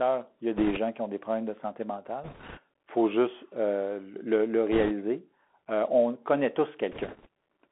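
From start to finish the speech carries the damage of a Bluetooth CVSD headset codec, a narrowband coder that sends one up-or-down bit per sample, which fits a 64 kbit/s stream. On a spectrogram the energy is boxed between about 250 Hz and 3.4 kHz, with nothing above. The adaptive step cannot keep up with loud, fast movement, so sibilants turn scratchy and a fine granular hiss fills the gaps, showing as a grainy floor between syllables.

Bit errors on a Bluetooth voice link break in four times: 0.57 to 0.78 s, 2.24 to 2.59 s, 4.72 to 4.92 s, and 6.92 to 7.26 s. Each stretch has an error rate of a few percent, the last slightly lower. Because every CVSD bit moves the waveform by only one small step and each error fades, no loud clicks appear. Instead each stretch gets a rushing, crackly noise, seen as a broadband smear across the band and a fuzzy, jittery waveform.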